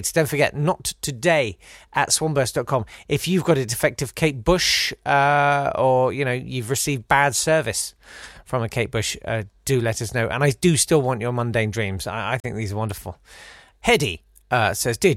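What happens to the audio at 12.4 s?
At 12.40 s, just after "mundane dreams I I", the sound drops out to silence for about 37 ms within a span running to 12.45 s, then resumes with "these are wonderful". This is most likely a Bluetooth stall: radio interference delayed packets, the headphones' buffer emptied, and playback halted until retransmitted packets arrived. The result is a brief hard gap rather than a fade or crackle, with the audio picking up where it stopped or slightly later.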